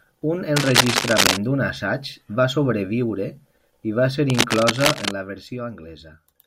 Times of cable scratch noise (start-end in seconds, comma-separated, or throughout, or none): 0.56-1.37, 4.30-5.11